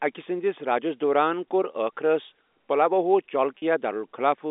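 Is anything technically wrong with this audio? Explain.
Yes. Just after "کور ٲخرس پلواہو", from 3.58 to 3.62 s, the speech briefly holds on a slightly buzzy, sustained tone. This is packet loss with pitch repetition: about 40 ms of audio went missing, which fits two lost packets, and the receiver filled the gap by repeating the last pitch period until the stream resumed.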